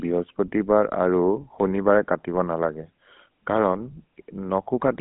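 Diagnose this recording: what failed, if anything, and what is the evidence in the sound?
GSM full-rate codec throughout: buzzy, gravelly speech, band-limited to 200 Hz–3.5 kHz, nothing above 3.8 kHz, fitting 13 kbps sparse pulse-excited vocal-tract coding.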